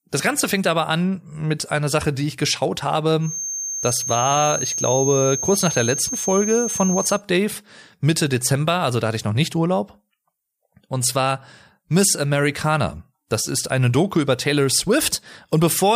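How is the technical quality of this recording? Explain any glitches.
The recording has one clear glitch. From 3.19 to 7.23 s, just after "die ich geschaut", a thin, steady feedback whistle at 6.4 kHz sits a few decibels below the speech, swelling and fading slowly in level. It is likely caused by a loudspeaker-to-microphone loop balanced right at the feedback threshold. On a spectrogram it shows as a flat horizontal line at 6.4 kHz spanning those four seconds.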